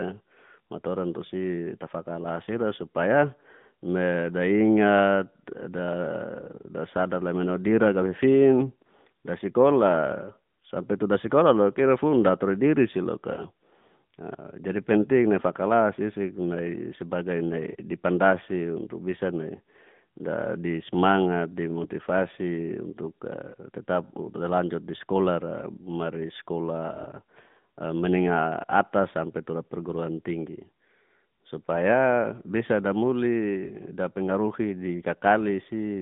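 Speech throughout the 36 seconds is carried by the AMR narrowband mobile codec. Its plainly buzzy, synthetic texture suggests a mid-rate mode near 10.2 kbps. The line passes roughly 150 Hz to 3.6 kHz, so a spectrogram shows a hard ceiling near 3.7 kHz with nothing above it and a thinned low end.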